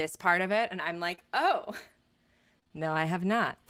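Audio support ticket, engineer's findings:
Lost packet rebuilt from error correction, 1.11 to 1.24 s: one 20 ms frame replayed from the next packet's low-bitrate copy, so no gap, but rougher, noisier texture.

Short concealed packet loss at 1.15, 1.19, 2.60, 2.63 and 2.67 s: 20 ms frames missing, decoder extended prior sound and crossfaded back. Heard as brief smears and wobble.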